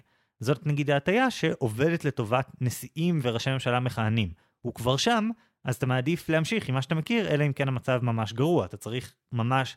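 No technical faults can be heard in this speech recording.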